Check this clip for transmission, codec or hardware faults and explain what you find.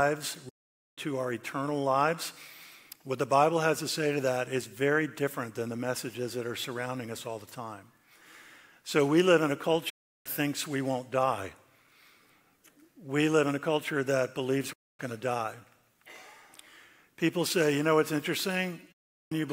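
There are four digital broadcast dropouts, at 0.49 to 0.98 s, 9.90 to 10.26 s, 14.73 to 15.00 s and 18.92 to 19.32 s. Each time, the receiver stopped getting decodable frames and muted until valid ones returned, so the audio sent during those gaps is gone. The sound fades out over about 8 ms, stays silent for roughly a quarter to half a second, then resumes. On a waveform each gap is a flat stretch after a brief taper. A spectrogram shows clean vertical blanks across all frequencies.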